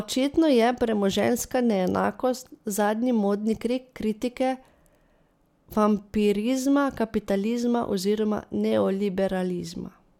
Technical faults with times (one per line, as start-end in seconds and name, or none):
none